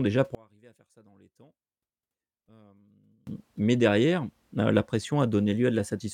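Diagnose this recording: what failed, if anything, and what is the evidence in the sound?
From 0.35 to 3.27 s the speech collapses by about 31 dB into a faint residue, recovering just before "mais derrière la la". One channel inverted is the likely cause, a polarity flip in the wiring, so the centred voice cancels when summed to mono.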